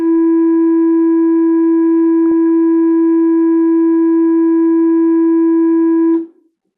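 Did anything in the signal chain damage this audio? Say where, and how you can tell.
Yes. The damage is at the codec stage, in the DAB reception path. At 2.31 s the music briefly burbles. Bit errors slipped past the error correction into the MP2 data. Corrupted samples put short blips of noise into single sub-bands. This is DAB burbling.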